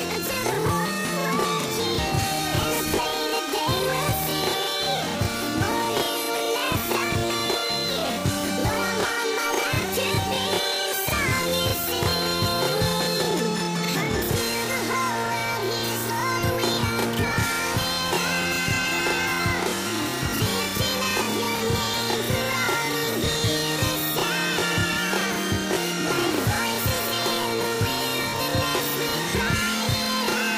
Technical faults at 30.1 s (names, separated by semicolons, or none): bit error spike